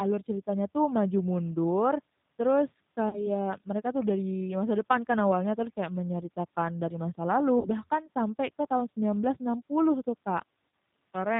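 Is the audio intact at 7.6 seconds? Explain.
No. From 7.59 to 7.69 s the speech smears into a buzzy tone or coloured noise that fades, then stays weak and distorted for a short while after. This is VoIP packet loss concealed by the speech codec: about 60 ms of audio went missing, which fits three lost 20 ms packets. The decoder kept extending its last pitch and filter at falling gain, and because each frame builds on the previous one, recovery lags.

The speech around that moment is also slightly rough and synthetic, with nothing above 4 kHz. That is plainly audible G.729 codec damage, consistent with an 8 kbit/s stream that rebuilds speech from a vocal tract filter, a pitch predictor and a few pulses per frame.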